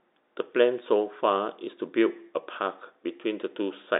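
From 0.99 s to 3.62 s the speech carries mains hum, a steady 60 Hz tone sitting roughly 30 dB below the signal. A ground loop or nearby transformer has let the power line leak into the recording, so a low, constant drone runs under the telephone-band speech and stops near the end. On a spectrogram it appears as a thin, unbroken horizontal line at 60 Hz spanning that interval. In the waveform it adds a slow, regular ripple beneath the speech.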